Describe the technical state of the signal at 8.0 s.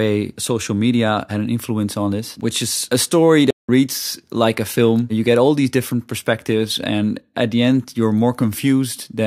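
At 8.0 s the speech signal is intact, with no technical fault audible at that moment.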